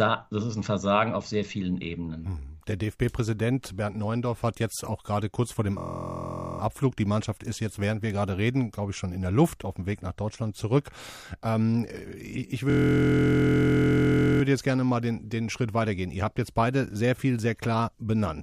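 Speech with two system hang loops: the driver stalled while playback kept cycling one 23.22 ms chunk, fitting a 1024-sample buffer, producing a steady 43.1 Hz buzz from 5.78 to 6.60 s after "gerade kurz vor dem", and from 12.70 to 14.42 s before "jetzt gerne mal den".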